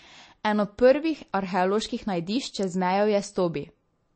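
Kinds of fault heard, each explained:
MP3 compression: likely an MP3 encode at a low bitrate, consistent with 32 kbps, which removes everything above 8.3 kHz and leaves a plainly audible watery, swirly sound.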